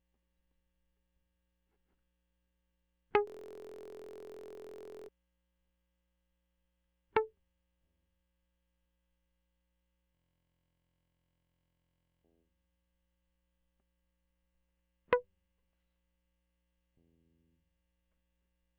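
At 3.27 s and again at 10.15 s, the music locks into a system hang loop. The same 23.2 ms slice repeats exactly, giving a steady buzz at 43.1 Hz. That fits a 1024-sample buffer replaying while the system froze. Each stall lasts about two seconds, until 5.09 s and 12.24 s.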